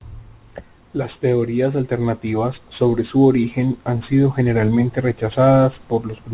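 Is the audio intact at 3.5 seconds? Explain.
No, at 3.5 seconds the speech carries aliasing, which runs through the whole clip. The sound points to a drop from 44.1 kHz to 8 kHz with no filter first, so content above 4 kHz folds back down as gritty, metallic hash around 30 dB below the speech.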